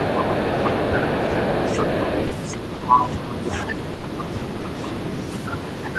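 From 0.0 to 3.5 s the other side's voice leaks through faintly, about 20 dB below the talker, likely residual loudspeaker echo the canceller failed to remove. Between 0.16 and 0.97 s, speech is suppressed in double talk: the talker's level dips by up to around 15 dB over roughly a third of a second, likely as the canceller attenuates both voices. The same suppression returns from 2.68 to 5.77 s, deeper at up to around 25 dB and covering about a second in total. From 3.97 to 4.03 s, 60 ms of sound is dropped by the voice detector and replaced with steady comfort noise, which points to discontinuous transmission. From 4.18 s to the end the leaking far-end voice returns, about 25 dB below the talker.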